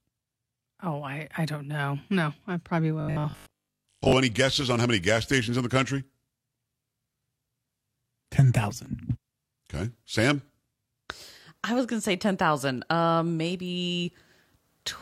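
From 3.00 to 4.12 s, right after "I'm probably" and ending before "any guesses on how", the speech turns into a rigid, metallic buzz. This is robotic sound from repeated short buffers. The likely cause is audio arriving too late, so playback loops a 20 ms slice instead. Most of that stretch is repeats, not real audio. The loop imposes a fixed 50 Hz pitch. The buzz follows the original speech only roughly.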